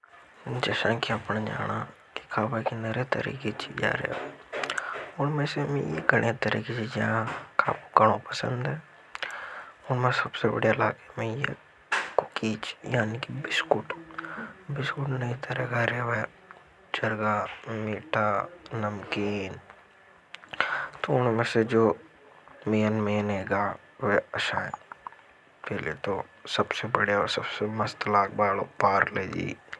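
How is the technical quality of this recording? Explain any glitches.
No technical faults are audible anywhere in the speech recording, so there are no glitches to explain.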